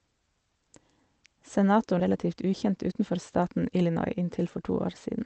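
A speech recording carried over a call path whose codec stops the high frequencies at 8 kHz has two faults. At 1.99 to 2.01 s a skip ahead occurs: about a second of audio was dropped while later audio was already waiting, so playback jumps straight forward with no filler, and the speech on either side is butted together. From 2.09 to 5.17 s a jitter buffer speed-up follows, with the buffer trimming repeated pitch-period slices to shed the extra delay, about a fifth of a second in total. The speech runs roughly 7% fast at unchanged pitch, sounding hurried.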